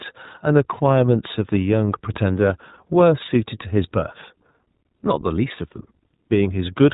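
Throughout the speech, the iLBC codec limits the band to narrowband, cutting everything above 4 kHz. Each 20 ms frame's excitation is coded independently, which fits the 15.2 kbps mode. The result is plainly audible: a dull, slightly rough and synthetic quality.

At 4.86 to 4.88 s come lost iLBC frames. A 20 ms gap, consistent with one missing frame, is concealed by repeating the last pitch cycle mixed with noise. It is heard as a brief held, buzzy vowel, and normal decoding resumes immediately afterward.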